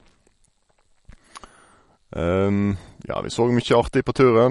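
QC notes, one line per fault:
throughout: MP3 compression. The speech sounds watery and swirling, s sounds turn metallic and chirpy, and consonant onsets smear. The cause is likely a heavy MP3 encode, with damage that fits a bitrate of about 48 kbps. Short of bits, the encoder discards weak frequency lines, which flicker on and off between frames, and cuts the treble above a fixed frequency. On a spectrogram, energy stops at a flat ceiling of 11.2 kHz, and the upper bands show blocky holes that blink frame to frame.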